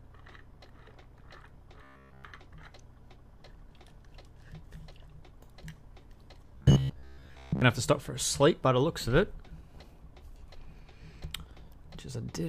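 From 1.84 to 2.24 s and again from 6.55 to 7.62 s, robotic sound from repeated short buffers appears, likely from a playback path replaying a roughly 15 ms chunk while fresh audio arrives late. That loop imposes a rigid 66.8 Hz buzz. The first span is entirely replaced, the second mostly. A spectrogram shows evenly spaced horizontal harmonic lines, and the waveform shows identical repeating cycles.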